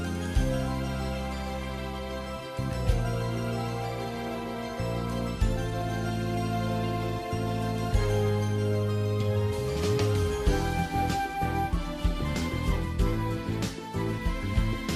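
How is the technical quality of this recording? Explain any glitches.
The recording has audible technical faults: the coding damage is plainly audible throughout, and there is one brief glitch.

Throughout the clip the sound is dull, with a gurgling, granular texture, and the upper frequencies come and go. This is likely MP2 compression at a bitrate that fits about 80 kbps. MPEG Layer II divides the signal into 32 equal sub-bands and allocates bits to each. When bits run short, whole upper bands are dropped from frame to frame and the bands that remain are coarsely quantised, which produces this flickering, grainy dullness.

From 6.31 to 6.39 s there is DAB burbling, a short watery, bubbling disturbance lasting a few frames. With weak DAB reception, bit errors at a rate of roughly 0.1 % got past the error correction into the MP2 data. Corrupted samples inject brief bursts of noise into individual sub-bands, and corrupted scale factors can make a sub-band jump in level for up to a frame. 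The result is this momentary bubbling blip.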